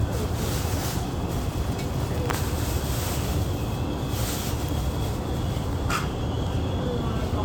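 Compressed frames were skipped in this recording of sounds: the decoder lost or rejected whole 23.2 ms frames, so playback leaps ahead at 2.32 s by around a fifth of a second and at 6.20 s by around a tenth. That fits roughly ten and five missing frames.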